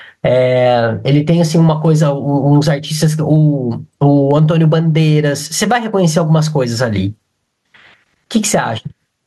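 Across the whole speech recording, the level see-saws by something like 15 dB and the dynamics sound squashed flat. This gain pumping most likely comes from an input gain set far too high, with a fast limiter or compressor clamping down on every peak.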